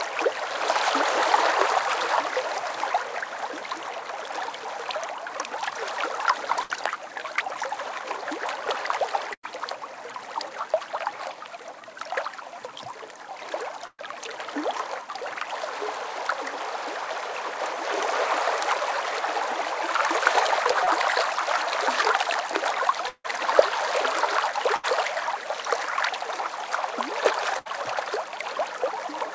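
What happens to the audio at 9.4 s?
A burst of packet loss runs from 9.33 to 9.45 s. Packets arrived too late or not at all, so the receiver stretched the last sound for about 100 ms, fading it as the gap went on. Playback then resumes with roughly 100 ms skipped.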